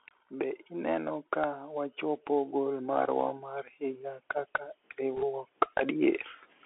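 From start to end the speech carries the narrowband sound of a Bluetooth CVSD headset codec. The band stops near 3.4 kHz, s sounds turn scratchy, and a granular hiss sits underneath, which fits one-bit delta coding at 64 kbps. A spectrogram shows a hard ceiling with grainy fill below it.

From 0.29 s to 3.09 s the automatic gain rises. The control judged the input too quiet and raised its gain by about 6 dB over nearly three seconds. Speech and background swell together, and the waveform envelope visibly widens across that stretch.

Between 5.16 s and 5.24 s, bit errors on the Bluetooth voice link add a brief rushing crackle. The flipped bits point to an error rate of roughly one to two percent. Each error carries little weight and fades quickly, so there are no sharp clicks, only a short smear of noise within the narrow band on the spectrogram.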